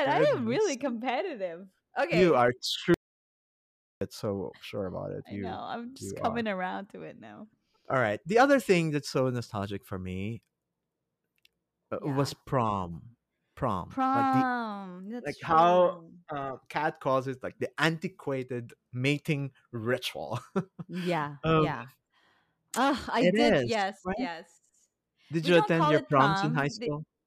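At 2.94 s the speech hits an audio dropout to silence, dead silence with no room tone until 4.01 s, likely a lost input link, just before "so sure about it".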